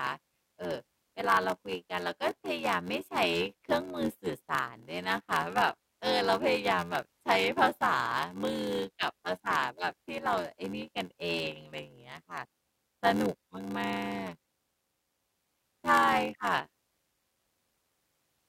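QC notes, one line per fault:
Throughout: block size mismatch (padded). A steady buzz at about 86.1 Hz runs under the speech for the whole clip. One stage hands over shorter blocks than the next stage reads, and each block is topped up with zeros. The buzz rate fits a 512-sample read block. The speech plays at 0.861 times normal speed. Pitch stays near normal. The gaps stretch the timing without resampling the audio.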